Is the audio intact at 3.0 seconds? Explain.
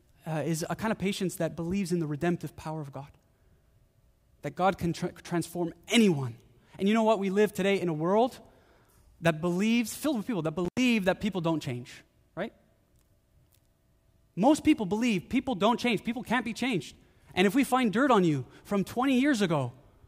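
Yes, at 3.0 seconds the speech plays through cleanly, with no dropout, click, distortion or other fault at that moment.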